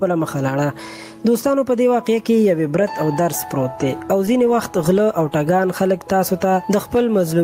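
Gain pumping runs through the whole clip, with the gain swinging by around 15 dB. This likely comes from input gain set far too high, with a fast limiter clamping down on every peak.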